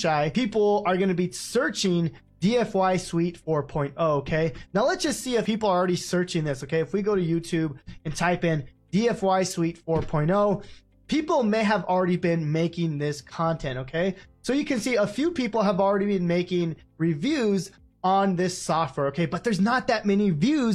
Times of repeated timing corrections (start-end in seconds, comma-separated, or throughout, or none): none